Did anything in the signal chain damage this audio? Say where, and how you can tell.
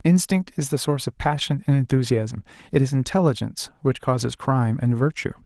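No, nothing in this speech stood out as damaged by any stage of the signal chain on listening.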